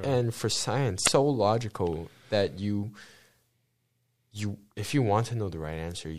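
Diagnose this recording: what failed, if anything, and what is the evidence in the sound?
The fault sits at the codec stage: damaged data in a compressed stream. At 1.03 to 1.08 s, about 30 ms into the second second of the speech, a short glitch breaks through where the frames are corrupted. Some bytes in that stretch of the encoded file or stream were lost, zeroed or overwritten, so the decoder misread those frames, dropped sync, and output garbage until it locked onto the next valid frame header.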